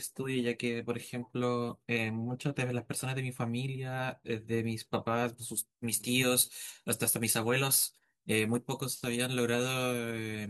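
From 5.57 s to the end at 10.49 s the speech has pre-emphasis left on: the treble boost that FM 75-microsecond emphasis applies was never undone, leaving 10 kHz about 14 dB hotter than 1 kHz, so it turns thin, bright and hissy on sibilants.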